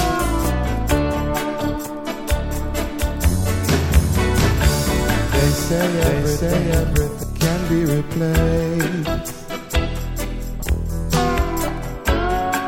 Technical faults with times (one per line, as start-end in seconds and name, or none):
2.51-7.23 doubled audio track